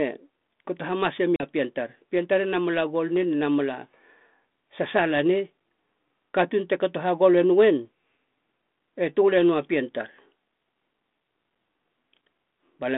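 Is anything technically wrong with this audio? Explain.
Yes. At 1.36 to 1.44 s, just after "kato hamase", packet loss on an ADPCM call dropped about 40 ms, roughly two packets. The decoder's adaptive predictor falls out of step with the sender's, so a hard-edged silent hole is followed by briefly misjudged, disturbed speech until it settles. The G.726 ADPCM link itself runs at 32 kbit/s within a 200 Hz to 3.6 kHz band.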